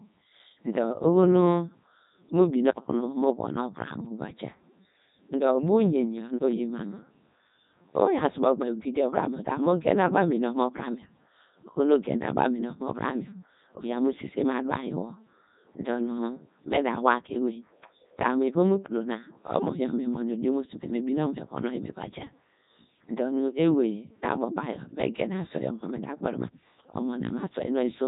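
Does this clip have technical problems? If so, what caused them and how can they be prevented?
Yes. Throughout, the speech is coded by a Codec 2 vocoder. It sounds robotic and buzzy. The decoder rebuilds the voice from sine waves using only pitch, voicing, energy and envelope. Nothing remains above 3.8 kHz, which fits Codec 2's top 3.2 kbit/s mode. Prevent it by recording or sending speech through a waveform codec at a higher bitrate.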